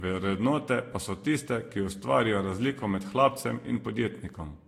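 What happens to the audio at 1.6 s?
At 1.6 s the speech sounds swirly, hollow and smeared, with soft attacks and nothing above 16.6 kHz, as it does throughout. This is likely generation loss from about four lossy re-encodes.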